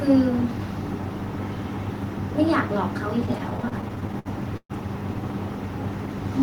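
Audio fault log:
3.19–4.72 s, repeated stalls (stutter): packets arrived late or too slowly, so the jitter buffer kept running dry and the receiver held the last sound over each of 17 gaps, about 340 ms in all, the longest 124 ms. About a fifth of this stretch of speech drags and stutters, though nothing is lost.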